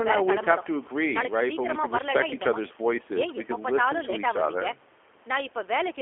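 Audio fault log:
throughout: G.729 codec, speech rebuilt from a coarse pulse-driven model, fitting an 8 kbit/s stream, audibly rough and synthetic; spectrogram empty outside 300 Hz–3.4 kHz.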